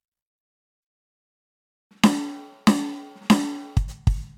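Nothing goes wrong anywhere in this bit of music; there's no technical fault to point to at any moment.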